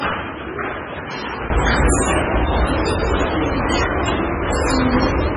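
From 0.0 to 1.5 s the sound is dull, about 10 dB quieter and cut above 6.4 kHz, with a faint noise floor. This is likely an input switched to a poorer device, with a 20 ms gap where it changes back at 1.5 s.

Throughout, nothing remains above 10.5 kHz, and heavy watery swirling points to MP3 compression at a very low bitrate, around 16 kbps.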